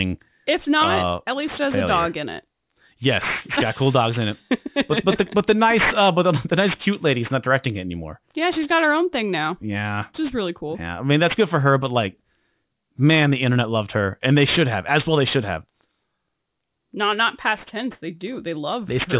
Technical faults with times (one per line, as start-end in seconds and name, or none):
0.00-19.20 aliasing